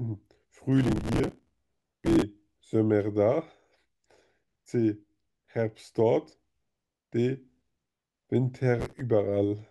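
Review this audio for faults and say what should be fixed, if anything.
Processor overload crackle runs from 0.72 to 2.22 s and again, briefly, from 8.80 to 9.01 s. Audio buffers were missed in a long run, and each gap was filled by replaying a scrap of old audio with hard edges. The result is a gritty, tearing crackle over the speech, at a rate that points to buffers of about 5 ms. To prevent it, reduce processing load or enlarge the audio buffer so every deadline is met.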